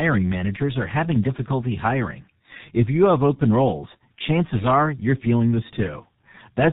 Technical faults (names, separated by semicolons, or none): G.723.1 codec; loose connector crackle